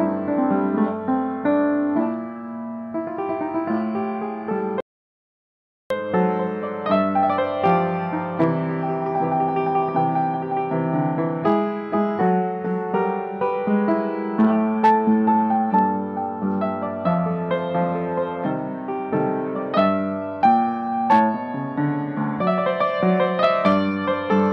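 At 4.80 s the sound cuts off abruptly in mid-flow and returns at 5.90 s, leaving about 1.1 s of audio dropout to silence. The gap is silent with no room tone or noise floor underneath, which sets it apart from a noise gate or a quiet passage, and there is no smoothing or repeated material as packet-loss concealment would leave. The input was likely lost briefly while recording continued, so that stretch of sound is missing.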